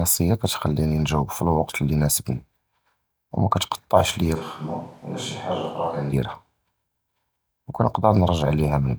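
From 4.37 to 6.11 s the speech turns abruptly hollow, thinner and quieter, with more room noise, likely a switch to a distant microphone. Unlike a plain level drop, the tone changes too.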